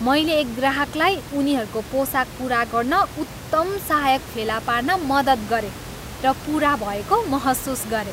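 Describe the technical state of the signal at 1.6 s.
At 1.6 s the audio is intact, with only the room's own background noise sitting about 14 dB below the speech.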